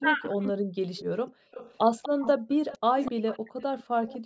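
From 0.0 to 0.98 s, the speech dips by roughly 40 dB in pieces, likely speech suppressed in double talk. Both ends talked at once, and the canceller turned the talker down too.

A faint delayed copy of the voice appears from 0.01 to 0.29 s and again from 0.97 to 4.18 s. It trails by 246 ms, well below the speech. This is likely an echo leak from a loudspeaker end whose canceller missed part of its own pickup.

The room sound drops out briefly at 1.31 to 1.51 s (about 38 dB), 2.38 to 2.47 s (about 37 dB) and 3.94 to 4.25 s (about 36 dB). This is background gated by the echo canceller.

The speech dips roughly 40 dB again from 2.75 to 3.55 s, the same likely double-talk suppression.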